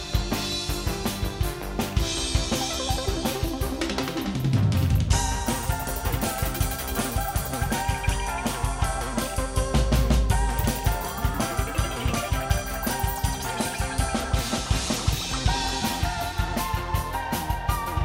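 No technical faults can be heard anywhere in the audio; the signal stays continuous and steady throughout.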